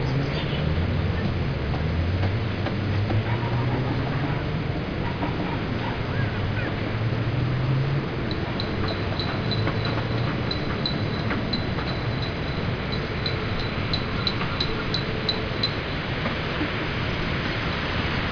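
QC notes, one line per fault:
Nothing to flag here; I couldn't hear a single fault anywhere in these sounds.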